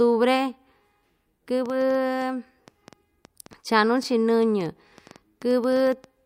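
From about 1.66 s right through to 6.05 s there's a train of clicks riding over the speech: sharp, near-identical ticks arriving roughly six times a second, but at an uneven pace rather than a steady beat. There are around thirty of them, and they peak at about the same level as the speech itself, so they poke through in the pauses too. That pattern points to a likely cause in interference from nearby equipment or a faulty connection or power supply.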